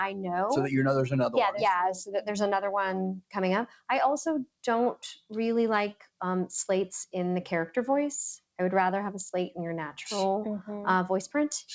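At 2.05 to 2.21 s the noise suppressor cuts the sound, pulling it down by about 14 dB for roughly 150 ms. The level sinks but never drops to silence the way a dropout would, and, heard through a call codec band-limited to 8 kHz, the dip is a brief suppression.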